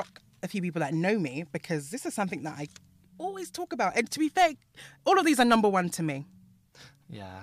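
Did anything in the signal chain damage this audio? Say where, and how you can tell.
No, nothing in the signal chain has damaged this speech recording. There is nothing to point to at any stage, from capture through to playback.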